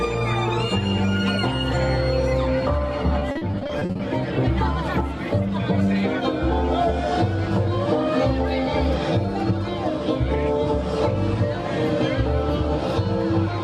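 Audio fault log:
3.19–4.01 s: repeated packet loss (robotic sound). A rapid run of short dropouts, the longest about 40 ms, each patched by extending the preceding sound. About 300 ms of the stretch, over a third, is filled-in audio, giving a choppy texture.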